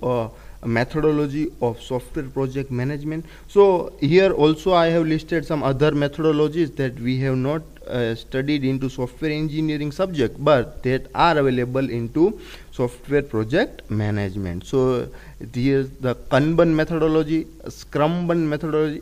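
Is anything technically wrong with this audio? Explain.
No, nothing is technically wrong with this audio.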